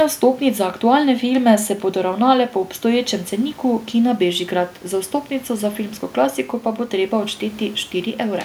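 Nothing goes wrong anywhere in this speech recording, and the only thing underneath it is a faint bed of room noise sitting about 30 dB below the talking, which is just the space the microphone was in.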